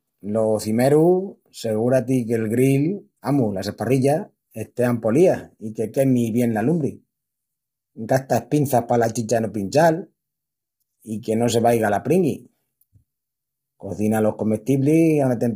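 From start to finish the speech sounds rough and grainy, with noise filling the gaps between harmonics and a synthetic-sounding top band, most likely low-delay AAC compression at a heavy level that fits about 24 kbps. Unlike ordinary AAC smearing, its very short frames blur pitch structure rather than time.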